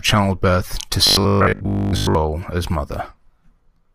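Audio likely arrived too seldom from 1.07 to 2.15 s, just after "childbirth to", so a roughly 20 ms buffer was replayed through most of that stretch. This gives robotic sound from repeated short buffers: a rigid 50 Hz metallic buzz loosely following the speech.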